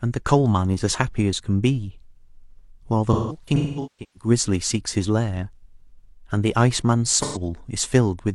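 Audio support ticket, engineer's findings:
AAC frame loss with concealment, 3.13–4.30 s: smeared, phasey speech with dropouts. About 0.73 s lost, scattered over about 1 s, longest gap around 0.2 s. The decoder repeats the last good spectrum, then fades. Spectrogram: frozen horizontal smears, energy decaying to near-silence. Waveform: envelope sags, then recovers.

Same fault, 7.22–7.41 s: 128 ms patched, which fits about three lost frames. Brief noisy, blurred smear. Spectrogram shows a short frozen band.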